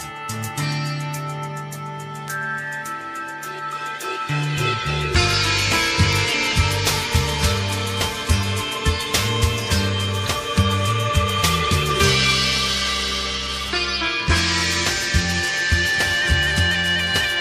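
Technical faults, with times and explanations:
2.28 s, bit error spike: a flipped bit corrupts what sounds like about three consecutive samples, jumping to about -13 dBFS, giving one brief broadband tick unrelated to the sound.
6.13 s, 7.13 s, 11.30 s, bit error spike: a single sample's value leaps by a power of two to about -7 dBFS and returns, producing a sharper, louder isolated click.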